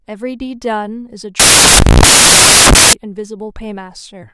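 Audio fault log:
1.40–2.93 s, samples built from the wrong bytes: loud white noise replaces the speech, because misassembled sample bytes push the fast-changing low bits into each value's large part.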